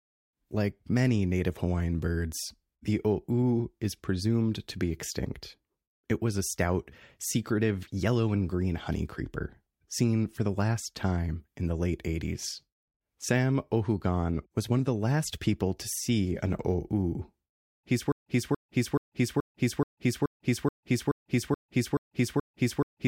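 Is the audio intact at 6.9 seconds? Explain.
Yes, the speech at 6.9 seconds is intact, with no audible fault at that moment.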